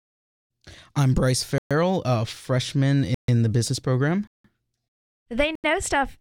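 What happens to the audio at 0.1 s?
Nothing goes wrong at 0.1 s: the audio is intact at that moment, with no dropout, click, distortion or other fault.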